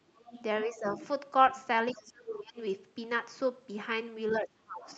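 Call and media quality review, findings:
Other side's voice leaking through: residual echo likely not cancelled by the echo canceller. Far-end voice is heard about 10 to 30 dB under the talker, at 0.15–0.42, 0.85–1.08, 1.91–2.12, 2.29–2.40 and 4.91–4.96 s.

Speech suppressed in double talk: the echo canceller likely mistook overlapping talk for echo and attenuated the near end. Talker's level drops about 10 dB at 0.71–0.93 s and about 25 dB at 1.94–2.57 and 4.41–4.89 s.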